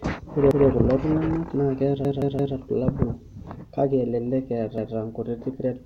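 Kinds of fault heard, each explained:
Repeated buffer: New audio arrived late, so the device replayed its last 171 ms block, which fits an 8192-sample buffer. The speech stutters with a hard join at 0.51 s and 4.78 s. From 2.05 s it repeats three extra times. No speech seems lost.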